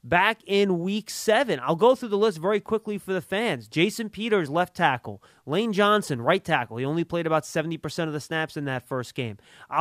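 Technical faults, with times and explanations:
No technical faults can be heard in this speech recording, and the signal holds steady throughout.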